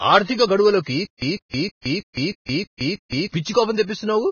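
Speech that carries heavy Vorbis compression throughout: nothing remains above 6.5 kHz, and the treble that survives has turned grainy and hissy, with blurred consonant attacks. This is likely a low-quality Vorbis encode, consistent with a bitrate around 14 kbps. Unlike a simple low-pass filter, the remaining band is itself noisy rather than clean. Right after "ఆర్థిక గడువులకు", from 1.05 to 3.27 s, there is a stutter with silent gaps. The same 149 ms burst repeats 7 times, each followed by 168 ms of digital silence, a steady 317 ms cycle. This is likely a stalled player or stream replaying its last fragment on each retry. What sets it apart from plain dropouts is that identical sound returns at an even pace instead of the audio simply vanishing.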